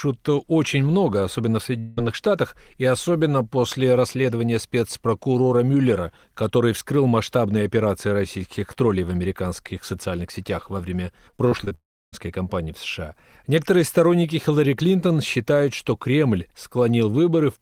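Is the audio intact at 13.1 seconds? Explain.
Yes, at 13.1 seconds the speech plays through cleanly, with no dropout, click, distortion or other fault to be heard at that point.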